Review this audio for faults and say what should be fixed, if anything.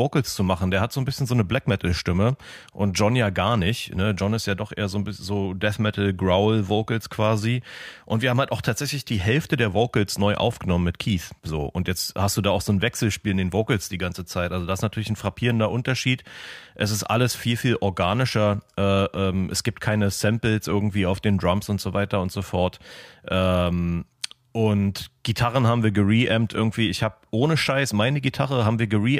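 Nothing in the signal needs fixing: the level, timing and continuity of the audio hold steady throughout.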